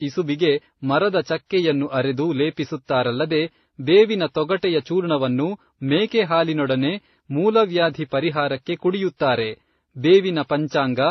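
Throughout, the speech stops dead at 6 kHz and carries mixed swirly, smeared artefacts, likely from transcoding between lossy codecs, each pass adding its damage.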